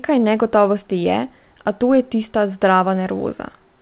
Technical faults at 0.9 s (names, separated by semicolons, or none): clock drift between sender and receiver; repeated timing corrections